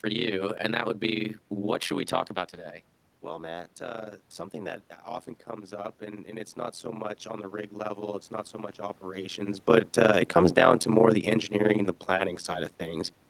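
From the start there's overlap-add ripple: frames are rejoined with an overlap that doesn't sum evenly, so the level dips by about 60 dB around 100 times a second, giving a metallic buzz with extra tones around each note. Between 5.47 and 9.51 s, after "uh something that often" and before "but uh it comes", the input drops by about 15 dB, and the automatic gain rising kicks in, slowly adding about 6 dB so voice and room noise swell together.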